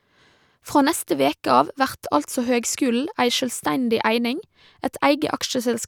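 Speech, with no audible faults.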